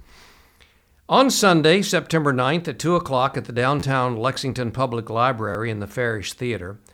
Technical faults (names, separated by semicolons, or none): repeated buffer